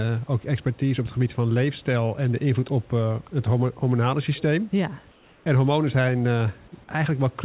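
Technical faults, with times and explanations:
5.12–5.46 s, comfort noise in place of the background: the room noise becomes a steady, featureless hiss about 2 dB quieter, likely the receiver filling a transmission pause with synthetic noise.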